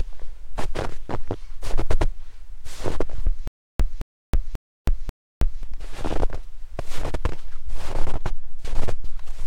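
From 3.48 s to 5.63 s, playback likely stalled and kept retrying. Each attempt replayed the last fragment and then ran dry, which produces a stutter with silent gaps. A 218 ms burst of the same audio repeats four times, each copy followed by about 321 ms of dead digital silence. The cycle is an even 539 ms, giving a mechanical, hiccuping rhythm. Whatever should have sounded during that stretch is missing.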